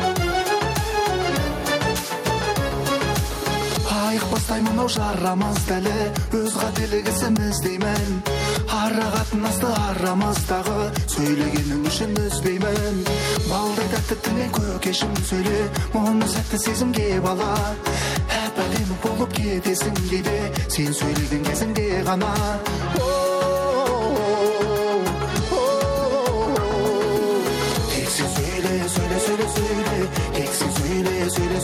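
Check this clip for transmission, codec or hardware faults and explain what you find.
There's one fault, and it runs through the whole clip: gain pumping. The level keeps swinging by roughly 5 dB. The likely cause is input gain set far too high for the microphone, with a fast limiter or compressor yanking it down on each peak. Loud and soft passages end up squashed close together.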